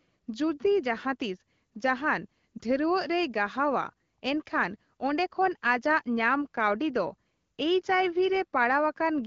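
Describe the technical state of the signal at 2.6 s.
A brief dip or warble in the speech from 2.58 to 2.61 s comes from a lost AMR speech frame. A radio error made the frame fail its checksum, and the decoder filled the gap with the last good pitch and vocal tract settings at reduced gain. The roughly 20 ms gap fits a single lost frame.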